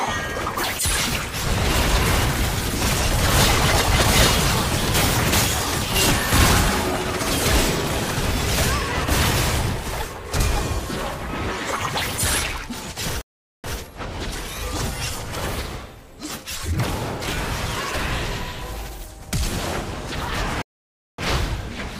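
At 13.21 s and 20.62 s a stream reconnect restarts the decoder: about 0.42 s, then 0.57 s of silence, after which the sound resumes 140 ms and 20 ms earlier, repeating briefly.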